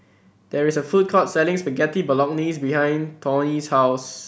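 Nothing in the recording stood out as a technical problem on listening.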